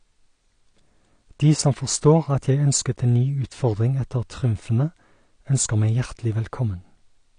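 A speech recording that has likely been through low-bitrate AAC compression, consistent with AAC-LC at around 32 kbps, for its whole length. Nothing is present above 9.8 kHz, and the codec damage is plainly audible as dull, smeared tone with a warbling, fizzy texture on sustained sounds and sibilants.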